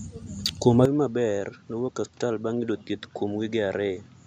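At 0.85 s the speech abruptly turns duller and quieter, dropping by around 10 dB with nothing left above 7.6 kHz, and it stays that way to the end. A faint new background noise appears at the same instant, with no gap at the join. The likely cause is an input switched to a poorer device partway through. A simple gain change or a low-pass filter would not bring in a different noise floor and tone at the same moment.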